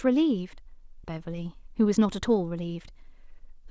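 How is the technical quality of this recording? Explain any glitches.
The recording has two glitches, heard through band-limited audio with nothing above 8 kHz, which fits a wideband call codec such as G.722.

At about 1.04 to 1.11 s there is a skip ahead. Roughly 400 ms of audio was discarded while later audio was already queued, so playback jumps forward with almost no gap. The sound lurches abruptly. On a waveform, two mismatched envelopes meet at a near-direct splice.

From 1.63 to 2.06 s there is a jitter buffer speed-up. The receiver trimmed tiny pitch-period slices to shed excess delay, a few tens of milliseconds in total, playing about 8% fast at unchanged pitch. The audio sounds slightly hurried. A spectrogram shows compressed timing with harmonics at the same height.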